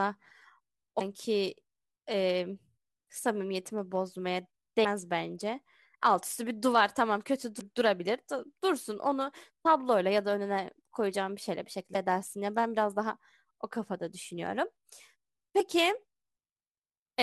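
Speech with damaged data in a compressed stream, heard as brief disturbances of 38 to 48 ms at 0.97, 4.81, 7.57, 11.92 and 15.57 s, where the decoder misreads corrupted frames.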